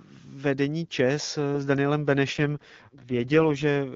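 Speech over an AMR-WB (HD Voice) link with an AMR rate drop from 2.31 s to 3.64 s. The bandwidth holds and nothing drops out, but the sound turns rough and raspy, consistent with the codec stepping down from about 23.85 to 6.6 kbit/s to protect a weak radio link.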